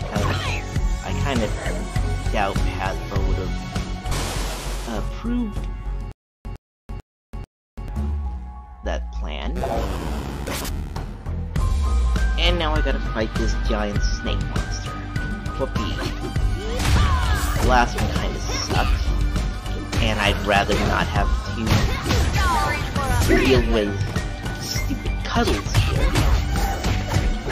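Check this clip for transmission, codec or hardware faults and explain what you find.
One fault stands out: a stutter with silent gaps from 6.12 to 7.88 s. A short burst of about 107 ms plays, then drops to dead digital silence for about 335 ms. The same burst returns four times, at an even 442 ms pace. The likely cause is a playback or stream stall, where each retry replays the last buffered fragment before running dry. Whatever sound belonged in that stretch is missing.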